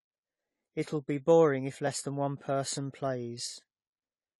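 Blocks of digital silence hit this speech clip at 1.87 s, just after "be boring if", and again at 3.54 s. Each drops the signal abruptly to silence for about 0.73 ms, consistent with a 32-sample block left unfilled, and the hard edges give a brief tick. AAC compression runs throughout: the audio sounds dull and smeared, with nothing above 11.5 kHz and plainly audible codec artefacts on sibilants, likely from AAC-LC coding at a low bitrate near 32 kbps.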